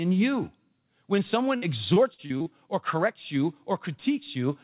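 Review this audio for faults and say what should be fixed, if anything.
Repeated packet loss (robotic sound) runs from 1.56 to 2.48 s, ending just before "or corrects you". Six short holes, the longest 58 ms, are each patched by extending the previous sound. About a quarter of that stretch is filled this way, so the speech turns choppy and robotic. The band stops at 4 kHz, which points to a G.711 call path. To prevent it, reduce the network loss or give the jitter buffer more depth so late packets still arrive in time.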